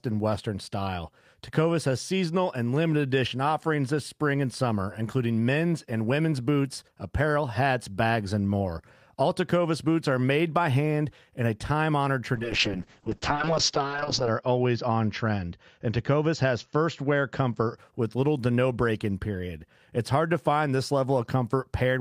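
A call bitrate drop hits this speech clip from 12.37 to 17.83 s: the encoder falls from 32 to 6 kbps, cutting audio bandwidth from 20 kHz to 8 kHz, so the sound turns muffled and rough.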